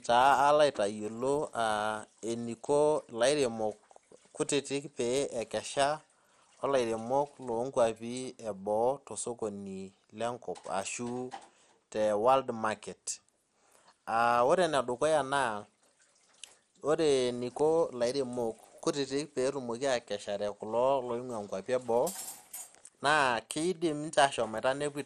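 Speech runs throughout with a dull, gurgling, granular texture and nothing above 14 kHz, likely MP2 compression at a low bitrate around 64 kbps switching off upper sub-bands.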